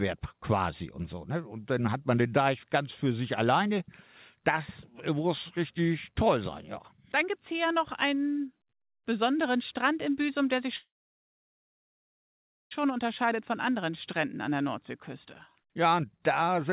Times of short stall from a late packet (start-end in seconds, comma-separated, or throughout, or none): none